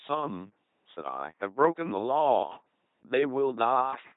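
Speech, run end to end through an LPC-10 vocoder with heavy damage, so it comes out as a buzzy, mechanical robot voice. Each moment gets either a pulse-train buzz or a noise hiss through a ten-pole filter, and the sound fits a 2.4 kbit/s stream. Nothing survives above 3.8 kHz.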